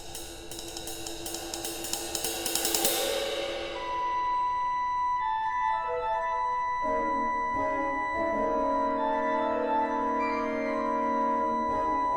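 No technical faults can be heard in this audio.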